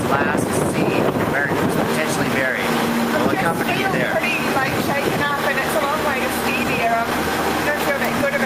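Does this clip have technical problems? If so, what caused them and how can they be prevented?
No, this clip has no technical problems.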